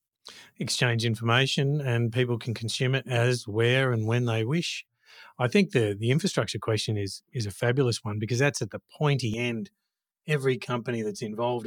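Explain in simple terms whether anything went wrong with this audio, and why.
Channel delay (comb filtering) from 9.34 s to the end: one channel arrives about five milliseconds late, so mixing them cancels evenly spaced pitches, making the speech sound hollow and phasey.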